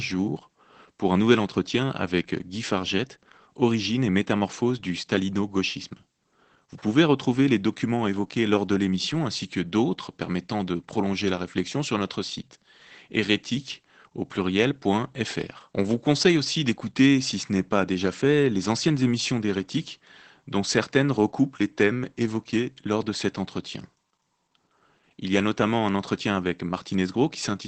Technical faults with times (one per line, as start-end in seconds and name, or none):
0.00-27.67 Opus voice compression